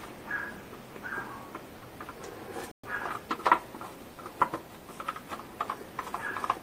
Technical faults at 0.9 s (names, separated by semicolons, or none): none